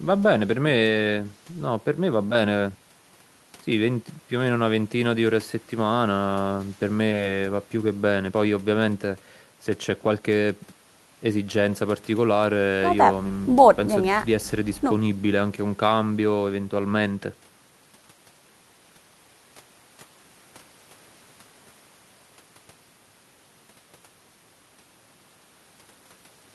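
No dropouts, clicks, distortion or level jumps turn up anywhere in the speech recording.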